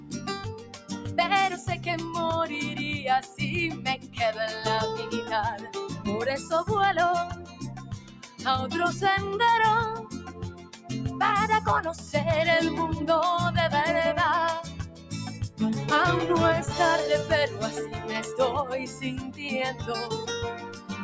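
A noise suppressor applied to music or sounds runs across the whole clip. Built for speech, it treats sustained tones, ambience and reverb as noise, so its gain swings by roughly 15 dB. Attacks pass while held material and tails sink, and the sound pumps and thins. The band stops near 8 kHz, as expected from call microphone processing.

Sound cut by the noise suppressor comes in seven stretches: 0.0 to 1.86 s (about 10 dB down), 3.24 to 4.19 s, 5.57 to 8.46 s, 9.99 to 10.9 s (each about 11 dB), 11.95 to 12.13 s (about 6 dB), 14.65 to 15.6 s (about 11 dB), and 18.85 s to the end (about 10 dB). In each stretch the steady or decaying parts sink and tails cut short.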